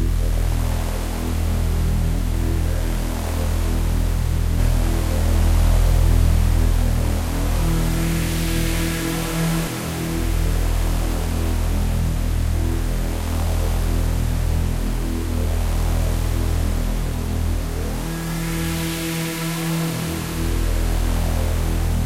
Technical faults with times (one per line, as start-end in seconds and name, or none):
4.59-9.67 doubled audio track